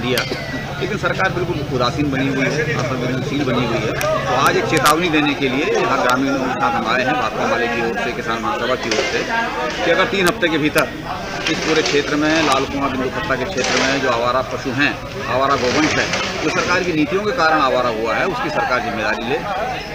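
Integer overflow cracks at 0.18 s, 4.01 s, from 4.47 to 4.91 s, and at 6.10, 10.27, 10.78 and 12.52 s. At each of these loud peaks the signal exceeded the largest integer the path could hold by only about 0 to 1 dB. Instead of being limited, the value wrapped around to the opposite sign and jumped across the whole range. Each event is heard as a violent, sharp crack, much harsher than clipping, and the 4.47 s stretch lasts almost half a second.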